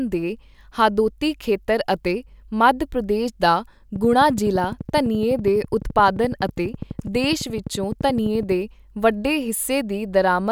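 A speech clip with a train of clicks from 3.96 to 8.53 s: regular ticks at 11.8 per second, roughly fifty, peaking about 5 dB above the speech, likely from electrical interference.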